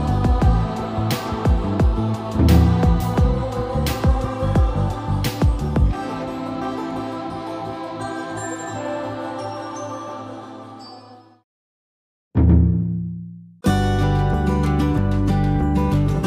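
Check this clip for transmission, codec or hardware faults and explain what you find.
Nothing here trips me up; I listened all the way through and found no faults to report.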